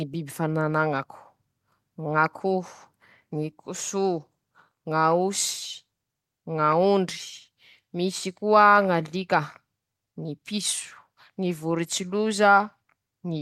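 No technical faults can be heard anywhere in this speech recording. There is nothing to place in time or trace back to a cause.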